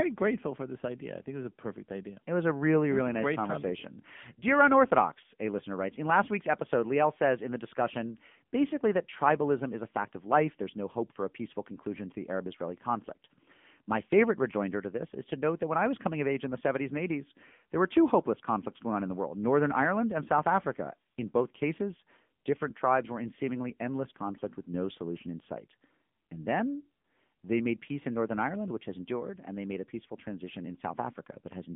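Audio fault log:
Throughout: AMR narrowband mobile codec. The speech sits in a phone-line band of about 150 Hz to 3.5 kHz, and nothing above 3.6 kHz survives. The coder samples at 8 kHz and rebuilds the voice from a vocal-tract model fed by a few pulses per 5 ms slice. The damage is plainly audible: a buzzy, synthetic edge, which fits a low AMR-NB mode near 8 kbps.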